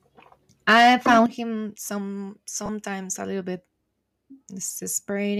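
From 0.69 to 1.23 s, the loudest syllables crackle harshly. This is likely microphone overload: peaks run about 8 dB past the converter's limit, and their tops are sliced flat.

At 1.26 s, the whole sound drops about 9 dB at once. The microphone volume stepped down, likely because the call software reacted to that clipping.

Between 2.66 and 2.69 s, 30 ms turns into a brief noisy smear. That fits three lost LE Audio frames of 10 ms. Another single frame drops at 4.94 s. The decoder patches each gap by reusing the last spectrum with random signs. The surrounding audio carries a faint grain, likely from Bluetooth LC3 compression.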